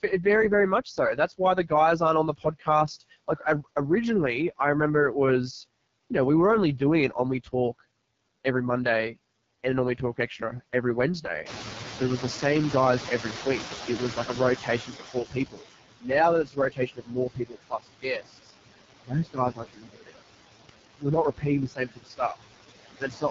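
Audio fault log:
Throughout: noise suppressor artifacts. The suppressor pulls the steady background down by about 19 dB, estimating the noise floor band by band and attenuating frame by frame. The floor sinks in the gaps between phrases and comes back up underneath the speech whenever it resumes, so the background pumps with the talker.
Throughout: AMR wideband (HD Voice) codec. The speech runs through AMR-WB at 6.6 kbit/s, one of the two lowest modes, and the damage is heavy. At this rate the pulse-excited vocal tract model has too few bits for clean detail, so the speech comes out rough and raspy. The band stops near 7.4 kHz, and the top region above 6.4 kHz is synthetic shaped noise rather than real speech content.
0.85–1.71 s, 2.38–3.67 s, 7.44–7.8 s, 14.16–18.53 s, 19.07–20.22 s, 20.98–22.37 s: speech cut by the noise suppressor. In each span the suppressor mistook parts of the speech for noise and turned them down with the background. 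The first span ends just before "aren't on the". The second runs from there to just before "originally I remember it". These early cuts are short, roughly 0.1 to 0.3 s of affected sound each, dipping about 12 to 15 dB. From 14.16 s onward they grow much longer and deeper: about 2 s of affected sound in the 14.16–18.53 s span, around 1 s and 0.7 s in the next two, with drops of about 20 to 21 dB. Soft consonants and quiet endings there sound swallowed or faint.
11.45–15.48 s: noise suppressor catching up. Just after "we talk extra every", the room noise jumps by about 17 dB near 11.5 s, settling only about 10 dB below the speech. The suppressor's noise estimate lags the jump, so the louder background comes through with less reduction at first and then sinks gradually over roughly 4 s as the estimate adapts, ending at about 15 dB of reduction.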